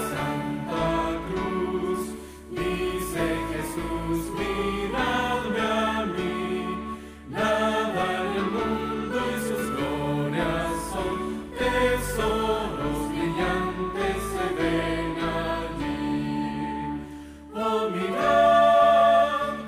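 At 17.95 s a loudspeaker feedback squeal begins: the microphone is hearing the loudspeaker it drives, and at 681 Hz the loop gain rises above one, so that tone feeds itself. It swells over roughly half a second into a howl around 10 dB louder than the sound, then stops at 19.32 s. Unlike a steady interfering whistle or hum, it grows from nothing, because it regenerates through the loop.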